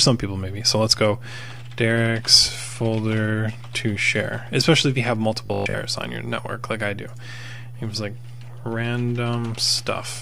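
From 5.46 to 5.82 s the sound turns into a rigid, metallic buzz at 50 Hz, robotic sound from repeated short buffers, likely from audio arriving too seldom so that 20 ms chunks are replayed for roughly half the stretch. The steady pitched buzz sets it apart from a simple dropout or stutter.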